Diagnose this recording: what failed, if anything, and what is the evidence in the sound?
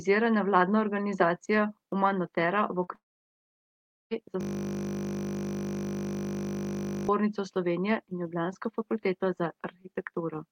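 Network, short concealed packet loss: at 2.83 to 2.90 s the speech briefly smears where about 40 ms went missing and the decoder extended the preceding sound to cover it.

At 2.95 s the speech becomes a short fading buzz, then silence for about 1.1 s, resuming at 4.14 s with roughly 1.2 s absent. This is likely a long network dropout.

Driver or buffer, system hang loop: from 4.41 to 7.09 s a single 20 ms slice repeats, producing a steady 50 Hz buzz while the hardware cycled a frozen ring buffer.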